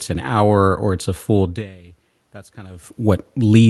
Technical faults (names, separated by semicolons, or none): automatic gain rising